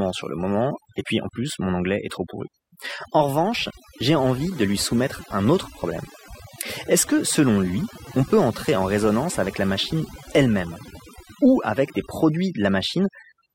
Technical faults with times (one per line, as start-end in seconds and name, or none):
0.00-13.54 overdone noise removal